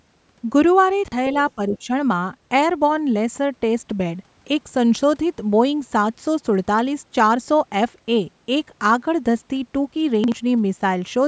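At 1.04 to 1.12 s the speech briefly jumbles: chunks out of order. A 40 ms chunk arrived one chunk late and played after the one meant to follow it, so nothing is lost but the sequence is scrambled.

Between 1.55 and 1.9 s the talker's level dips by about 10 dB, in pieces adding up to roughly a fifth of a second. This is likely speech suppressed in double talk, where the echo canceller, unable to tell this voice from loudspeaker echo while both sides spoke, turned everything down.

Inside that stretch, at 1.72 to 1.79 s, a faint second voice comes through some 20 dB below the speech, most likely the other side's voice leaking through from the loudspeaker because the echo canceller did not fully remove it.

At 10.24 to 10.32 s the same jumbled moment returns, again a 40 ms chunk played one chunk late.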